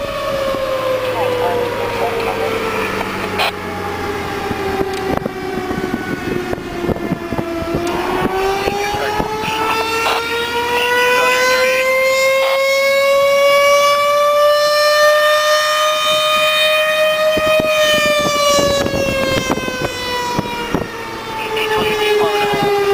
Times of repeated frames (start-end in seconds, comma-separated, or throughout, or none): none